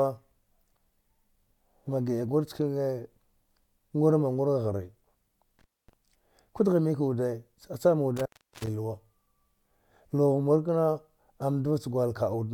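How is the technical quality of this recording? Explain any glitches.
The recording has two dropouts from an intermittent contact. A loose cable or plug briefly opened the signal path, at 5.59 to 5.93 s (just before "ku dghi mik") and 8.17 to 8.67 s (after "cha cham"), for about 0.25 s and 0.37 s. The speech vanishes into faint hiss, with crackle at each break.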